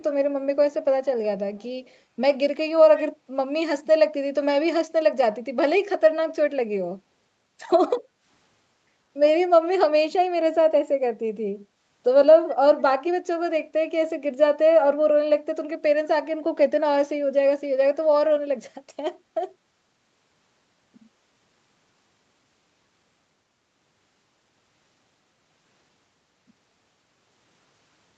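At 1.85 to 1.97 s, then 2.96 to 3.02 s, a short echo leak trails the speech by 155 ms, likely from a loudspeaker's echo canceller missing residue. The first is very faint; the second, about 20 dB down, shows as a brief, fainter repeat of the preceding speech pattern on a spectrogram.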